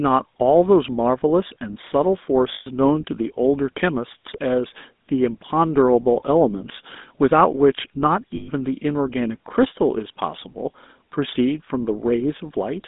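From start to finish the speech carries the signature of the GSM full-rate codec. The band is confined to roughly 200 Hz to 3.7 kHz, and the codec damage is plainly audible. Because the encoder rebuilds the voice from a vocal-tract filter excited by a sparse, regularly spaced pulse train, the result has a buzzy, gravelly texture rather than clean harmonics, consistent with a 13 kbps full-rate stream.

Lost GSM frames interrupt the speech twice, from 2.54 to 2.68 s and again from 8.36 to 8.49 s. Each gap is about 120 ms, which fits six consecutive 20 ms frames going missing. The decoder covers each loss by reusing the parameters of the last good frame, so the speech does not cut out cleanly. Instead it smears into a short, rough, metallic ring that holds until normal decoding resumes.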